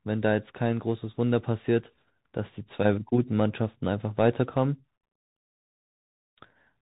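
Throughout, the speech carries Bluetooth CVSD headset codec damage: nothing above 4 kHz, scratchy s sounds, granular hiss, and slope distortion where the one-bit step lags loud transients.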